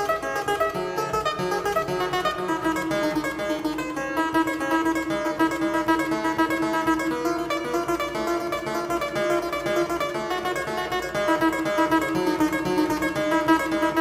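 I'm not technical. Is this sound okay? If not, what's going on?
Yes, nothing wrong here.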